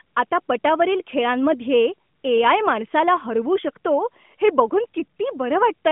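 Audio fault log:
Nothing to log here, as no faults turn up anywhere in this speech recording.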